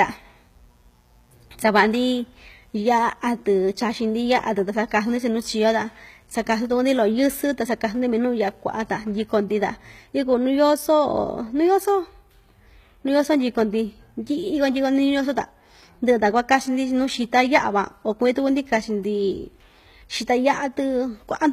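From 0.00 to 9.08 s a mains buzz sits under the speech at around 40 dB below it, then stops. It comes from sharp switching spikes, of the kind a dimmer, rectifier or unshielded line lets in, arriving twice in every 60 Hz cycle. The result is a stack of 60 Hz harmonics climbing into the kilohertz range, which is heard as a steady, raspy buzz rather than a smooth hum.

Across the whole clip the treble is plainly degraded. Sibilants have a gritty, metallic or lispy edge, and the spectrum stops entirely above 14.9 kHz. The likely cause is HE-AAC compression at a rate that fits roughly 20 kbps. That codec codes only the lower band and synthesises the top by spectral band replication, copying lower content upward under a coarse envelope. The rebuilt harmonics do not align with the real ones across the crossover, which is what makes the s sounds wrong.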